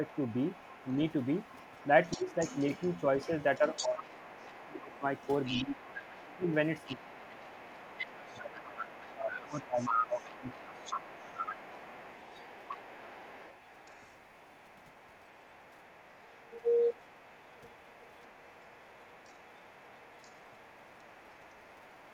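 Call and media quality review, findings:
Other side's voice leaking through: faint second voice from 0.06 s to the end, roughly 20 dB under the talker. Likely an echo canceller leaving loudspeaker playback in the mic. Unlike room noise or crosstalk, it follows the far end's turns.

Speech suppressed in double talk: talker ducks by roughly 10 to 25 dB at 2.16–2.31, 3.27–5.03, 5.51–5.77, 6.24–6.51 and 6.89–11.08 s, likely from echo-canceller gain attenuation during overlap. The dips coincide with far-end speech.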